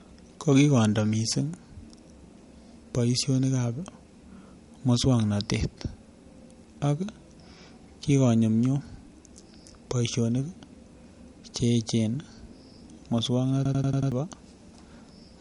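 From the start, the speech sounds band-limited and a bit swirly, with nothing above about 11.1 kHz. Despite the high bitrate of the final MP3, it behaves like low-bitrate audio saved at a high bitrate. The cause is likely a low-bitrate MP3, somewhere around 49 kbit/s, re-encoded at 320 kbit/s. The second pass just preserved the first encoder's cut-off and smearing. The extra bits can't bring back what was already thrown away.

Then, from 13.65 to 14.12 s, there's a system hang loop. The machine or driver stalled while the sound hardware kept replaying the same chunk of its ring buffer. That chunk is about 93 ms long, which fits a 4096-sample buffer. It repeats five times at 10.8 Hz, giving a machine-gun stutter instead of a buzz. Roughly half a second of the real audio is missing where the loop sits.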